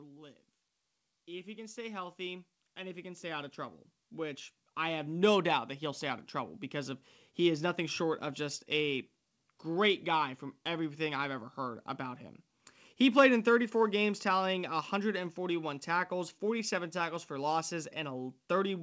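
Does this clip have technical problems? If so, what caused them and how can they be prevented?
Yes. An automatic gain rising fault runs from 1.25 to 7.07 s. The gain control judged the input too quiet and raised it slowly, by about 16 dB. Voice and background swell together until "he is nothing short". Prevent it by setting a proper input level so the gain control has nothing to correct. The call path itself leaves nothing above 8 kHz, which fits a G.722 wideband link.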